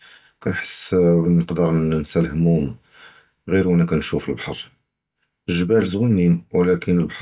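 No technical faults are audible.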